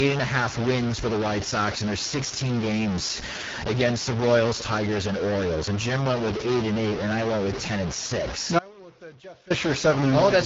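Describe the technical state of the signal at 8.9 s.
At 8.9 s the sound has fallen away abruptly to a faint residue about 25 dB below its normal level. This gap runs from 8.59 to 9.50 s, roughly 0.91 s. It is most likely an audio dropout to a faint residue: the wanted signal was lost while the path after the break stayed live, so only a weak leak remains until it returns just as suddenly.

Across this moment the sound also carries grainy or buzzy distortion, and quiet stretches fill with noise. The likely cause is a stuck bit, one data bit held fixed so that roughly half the sample values are pushed off by that bit's weight, following the waveform.

Beneath both, the audio is rough and raspy, with nothing above 7.5 kHz and a synthetic, noise-filled top band. This is AMR wideband (HD Voice) coding at one of its lowest rates, consistent with 8.85 kbit/s, where the speech model is too sparse to keep the sound clean.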